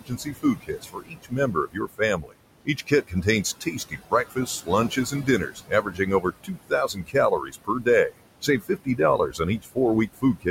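From the start and through the whole clip there are noise suppressor artifacts. The suppressor pulls down the bands it judges to be steady noise by about 21 dB, so the room noise, which sits about 12 dB under the speech, drops away in the gaps and surges back beneath each phrase. On a spectrogram the background appears as patchy, blinking specks of energy, and the waveform's noise floor pumps up and down with the talking.

Across the same span, from 0.0 to 10.47 s, there is speech cut by the noise suppressor, adding up to roughly four seconds in total. The suppressor mistakes quieter parts of the speech for noise and attenuates them with the background, at worst by about 21 dB. Soft consonants and word endings come out swallowed or faint. On a spectrogram, high-frequency consonant energy and decaying tails look clipped off or hollowed. In the waveform, syllable edges collapse abruptly toward silence rather than tapering.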